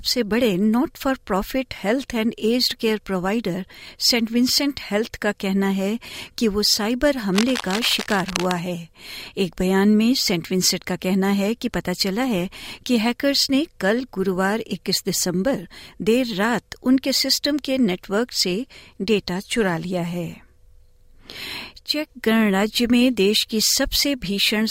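Cable scratch noise runs from 7.33 to 8.52 s: dense, irregular crackling and rustling laid over the speech, roughly 10 dB below it. A worn cable or connector being moved likely caused it, its contact resistance fluctuating rapidly and injecting noise into the signal.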